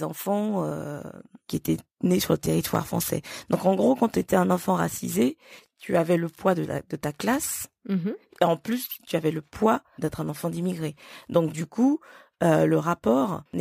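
Throughout the speech runs a crude rate conversion: samples were repeated by nearest-neighbour picking rather than filtered, in a regular pattern that fits a step from 32 kHz to 48 kHz. The resulting error sits roughly 20 dB below the voice and is heard as a gritty, inharmonic fizz riding on louder and brighter syllables. A spectrogram shows faint mirrored components crossing the harmonic stack, and a zoomed waveform shows small repeated-sample steps.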